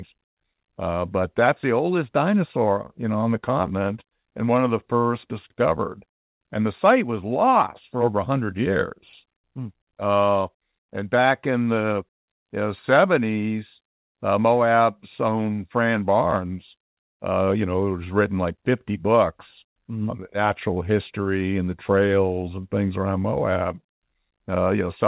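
There are no technical faults to describe in this speech clip, which comes through a G.711 call path with nothing above 4 kHz.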